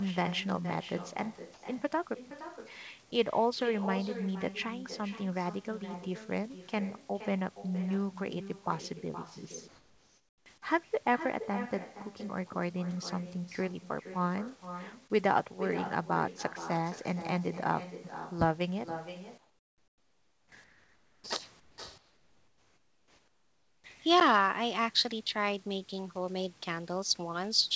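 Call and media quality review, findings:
Echo with no canceller, entire clip. Every phrase is followed about half a second later by a thinner copy roughly 12 dB down. Far-end loudspeaker feeding its mic, with no echo cancellation in the path. On the spectrogram, each speech burst has a fainter duplicate shifted right by about 0.5 s. On the waveform, a smaller envelope trails each syllable group.

Comfort noise in place of the background at 1.54–1.62 s, 9.68–10.46 s, 19.38–20.52 s, 20.64–21.24 s, 21.60–21.78 s and 21.98–23.84 s. In each pause, the real room noise gives way to a flat, featureless hiss about 2 to 12 dB quieter, with the biggest drop at 19.38 s. Likely discontinuous transmission on the sender side, with the receiver synthesising noise during silence. Spectrogram shows smooth, texture-less fill with level steps at segment edges. The waveform floor drops abruptly. Bandwidth tops out at 8 kHz throughout, which fits a wideband call codec.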